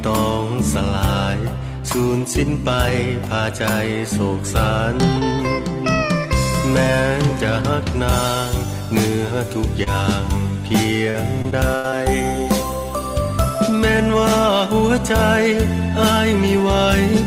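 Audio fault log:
9.83–9.88 s, short concealed packet loss. A sliver of the stream arrived too late to be decoded. The receiver covered the hole by extending the preceding sound, roughly 29 ms of synthesised fill, before crossfading back into the real signal. About 20 ms of original audio is simply gone. The result is a brief smear.
11.10–11.94 s, repeated packet loss (robotic sound). Over this stretch the stream keeps breaking up, with what sounds like about five separate holes. Each is patched by carrying the last sound forward, the longest lasting about 84 ms. Roughly a fifth of the span is fill rather than real audio, around 180 ms in all. Because the patches come in quick succession, the sound turns choppy, with pieces missing.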